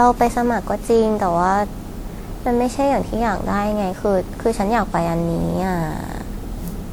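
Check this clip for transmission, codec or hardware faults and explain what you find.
One codec fault runs through the whole recording: generation loss. The speech is swirly, hollow and smeared, with blurred attacks, likely from about ten WMA re-encodes at 96 kbit/s. Unlike a single low-bitrate pass, the bandwidth still reaches 20.1 kHz.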